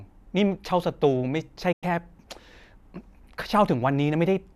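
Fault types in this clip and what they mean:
Digital broadcast dropout: the receiver stopped getting usable frames, either because the signal vanished or because the frames failed their checksum, so it muted until clean data returned. Here the speech fades out over about 8 ms at 1.72 s and comes back at 1.83 s. That leaves a single short hole of roughly a tenth of a second, which fits about four lost frames. Whatever was sent in that gap is simply gone.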